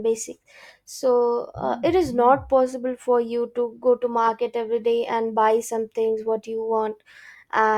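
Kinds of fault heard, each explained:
Corrupt frame decoded: a single compressed frame arrived with damaged bits, and the decoder played it anyway, so misread gains and codes put energy at the wrong frequencies. Here it is a brief, fairly low-level glitch from 2.71 to 2.74 s, between "uh it is not" and "for you to go". A spectrogram shows a short vertical smear of stray energy cutting across the speech harmonics, and the waveform shows a small, oddly shaped burst.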